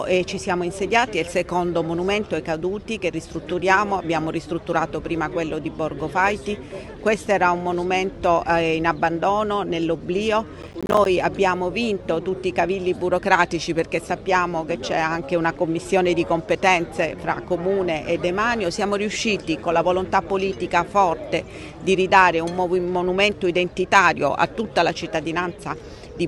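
From 10.62 to 11.06 s there's a burst of processor overload crackle: the machine couldn't keep up and missed around fifteen buffer deadlines, each probably about 10 ms, dropping in short silent gaps with hard edges. Together they sound like a gritty tear that stops once the load eases.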